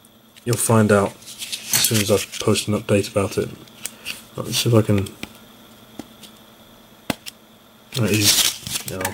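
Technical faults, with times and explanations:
3.31 to 9.14 s, sample clock jitter. From 3.31 s to the end, the converter's clock wanders, so each sample is taken slightly early or late. The timing spread is around 10 microseconds, which is large. A timing slip causes the most error where the waveform changes fastest. So the error tracks loud passages and high frequencies. Here it sits only about 10 dB below the sound itself. It is heard as a gritty hiss riding on the audio.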